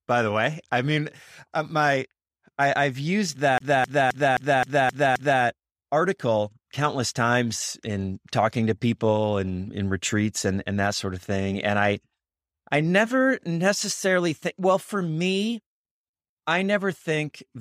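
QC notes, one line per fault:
3.58 to 5.42 s, CD stuck on one turn: the speech catches on a single 0.26 s slice and fires it seven times in a fast, even stutter with a brief mute at each jump. A scratch is throwing the laser back one track every revolution, until it releases before "article countless times in".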